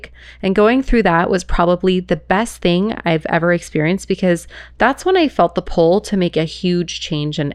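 No technical faults turn up at any point in the recording, so there is nothing to describe in time order.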